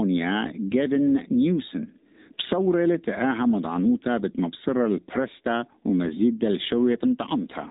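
From start to finish the speech has passed through an AMR narrowband mobile codec. Its 8 kHz sampling removes everything above 4 kHz, leaving a flat empty ceiling on a spectrogram. A sparse pulse-driven vocal model makes the voice plainly buzzy and synthetic, which fits a low bitrate of about 7.4 kbps.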